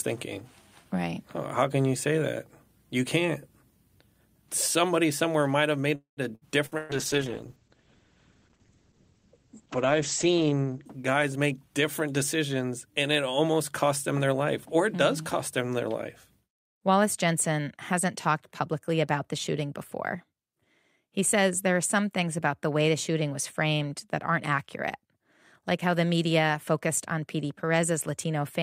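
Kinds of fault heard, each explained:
call audio freeze: Just after "somewhere might have", at 5.95 s, the sound stretches into a fading buzz or hiss that goes silent for about 120 ms before resuming where it left off. A likely cause is delayed packets draining the jitter buffer, inserting roughly 217 ms of gap with nothing lost.
burst of packet loss: Three short dropouts follow at 6.35 s, 6.66 s and 6.78 s, each a held buzz or fading hiss. Lost packets were concealed by continuing and fading the last sound, and about 60, 60 and 120 ms of audio are skipped.
call bitrate drop: From 6.93 s the speech turns rough, watery or muffled, with the top end gone above 8 kHz. The bandwidth estimate fell and the encoder went from 64 to 11 kbps, staying lowest for about 3.4 s before clearing near 12.0 s.
jitter buffer speed-up: From 11.26 s to 13.48 s, leading into "cost them their life", the speech sounds hurried at 110% speed with unchanged pitch. 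An overfull jitter buffer was trimmed by cutting short pitch-period pieces, around 200 ms in total.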